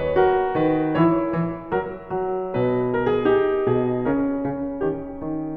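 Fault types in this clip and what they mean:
Nothing to flag here: this music clip comes through without any technical faults that a listener would pick up on.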